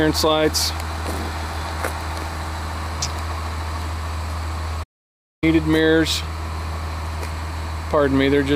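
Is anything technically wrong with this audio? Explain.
Yes. At 4.83 s the sound cuts out abruptly in mid-flow and the output stays silent until 5.44 s, a gap of about 590 ms, before the audio picks up again. This is a playback stall. The likely cause is that the player ran short of data to send to the output, or its playback thread was held up, so nothing reached the speakers until it caught up and resumed.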